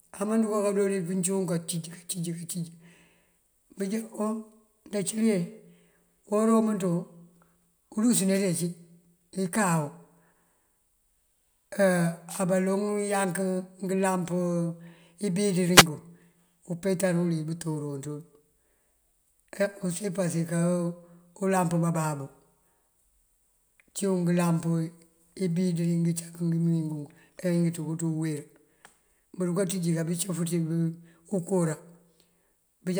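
At 8.34 to 8.39 s, 12.28 to 12.41 s and 15.71 to 15.87 s, wireless microphone noise hits break through the speech as brief swishes of static. Reflected radio paths cancel the FM signal, so receiver hiss surges. A spectrogram shows short broadband vertical smears, and the waveform shows noisy bursts over the speech.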